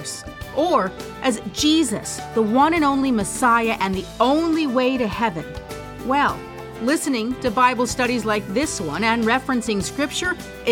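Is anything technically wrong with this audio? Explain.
No, there is nothing technically wrong with this audio.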